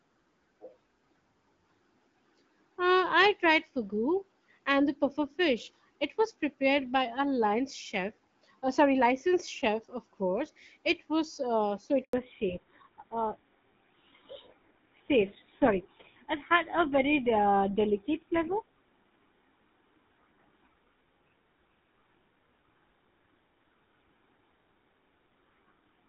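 Right after "was uh so", at 12.03 s, there's a handover gap. The phone switches networks and no speech frames arrive for 100 ms, so the sound drops away quickly and stays silent until 12.13 s, when the new link comes up. Whatever was said in that window is simply gone.

From 12.13 s to the end, there's a fallback to narrowband. Before the handover, the light coding and clear top end fit AMR-WB HD Voice at around 12.65 kbit/s. Afterwards nothing comes through above 4 kHz, which points to an older narrowband codec such as GSM full rate. The speech turns duller and rougher for the rest of the call.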